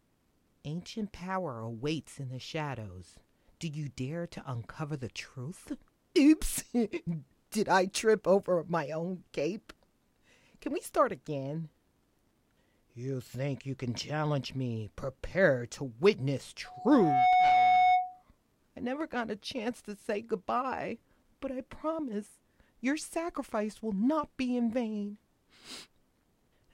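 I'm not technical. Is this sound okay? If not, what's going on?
No. From 16.65 to 18.23 s there's loudspeaker feedback squeal: a 733 Hz tone swells up within about a second and rings loudly, unlike a steady hum.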